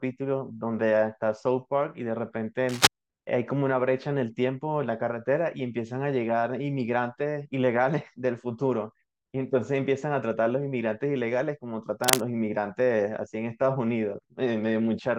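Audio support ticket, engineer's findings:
Cable scratch noise, two bursts: 2.69 to 2.88 s and 12.03 to 12.21 s. Dense, ragged scratching over the speech, roughly 5 dB above it, each burst about 0.2 s long. Likely a worn cable or connector being moved. Contact resistance jumps around as it flexes, which adds that uneven noise. Worth reseating or swapping the lead and wiggle-testing the jacks.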